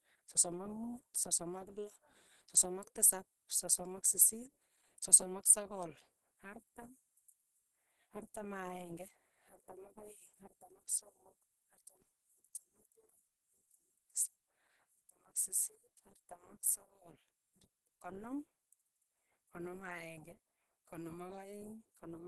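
Throughout this speech clip the sound is muffled and hoarse, with nothing above 12.5 kHz. This is likely Opus compression, running in its hybrid speech mode at a low bitrate that fits roughly 16 kbps and narrowing the band.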